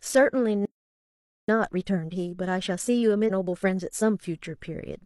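At 0.65 s the speech cuts out mid-flow and stays silent until 1.48 s, a gap of 0.83 s. This is a playback stall. The player likely ran short of data or had its output thread blocked. Sound resumes once it recovers.

From 1.48 s to 4.21 s comes time-compressed catch-up. The player trims its backlog by removing short slices and cross-fading the joins. Speech runs about 1.25 times faster at its normal pitch.

Inside that stretch, at 3.25 to 3.31 s, compressed frames are skipped. Frames were missing or rejected as damaged by the decoder. The audio jumps ahead by around 300 ms, which fits several frames of 46.4 ms.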